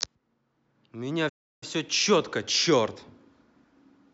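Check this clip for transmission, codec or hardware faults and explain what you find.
One fault: a playback stall from 1.29 to 1.63 s, where the speech cuts to silence for about 0.33 s, likely because the player ran short of data, unlike brief packet-loss dropouts.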